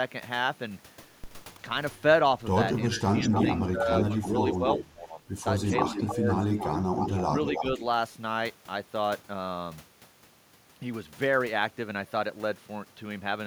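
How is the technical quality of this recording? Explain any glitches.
The call has two connected problems: the talker keeps getting ducked, and a delayed copy of the speech leaks back in.

Speech suppressed in double talk hits at 1.57–1.61 s, 2.91–5.23 s, 5.89–6.28 s and 7.58–7.83 s. The level dips by about 5 dB at the edges and up to about 15 dB in the long middle stretch. That's likely the echo canceller turning everything down when both ends spoke at once.

Echo leak shows up at 3.16–3.65 s, 4.03–4.35 s, 4.69–4.84 s and 5.6–7.65 s as a copy of the speech trailing it by about 0.3 s. The first burst is about as loud as the speech itself, and the rest sit about 5 dB below. It's likely a loudspeaker on the far end whose echo canceller didn't catch everything its mic picked up.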